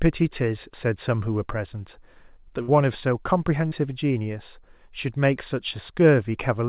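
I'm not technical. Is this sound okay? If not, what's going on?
No. A burst of packet loss at 2.62 to 2.70 s drops about 60 ms of speech; the receiver filled the hole by stretching the last sound, then jumped ahead.

At 3.68 to 3.73 s, a short concealed packet loss loses about 40 ms, patched over so it comes across as a quick smear or wobble.

The call line also cuts everything above 4 kHz, giving the usual phone-call dullness.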